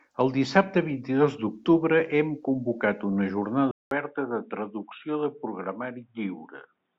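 At 3.71 s, just after "d'octubre hem convocat una", a 200 ms gap is followed by dull, boxy speech with nothing above 3.8 kHz, roughly 5 dB quieter, over a faint new noise floor. This is likely an input switched to a poorer device, persisting to the end.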